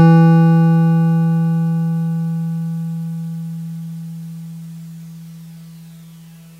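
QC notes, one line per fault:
Nothing to flag in this bit of music, so it can go through as it is.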